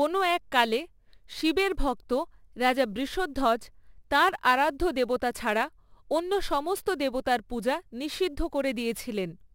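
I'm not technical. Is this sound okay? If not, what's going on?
No. The recording has sample clock jitter: its timing clock wobbles by a few millionths of a second, adding a hiss to the speech throughout, loudest on louder, brighter sounds.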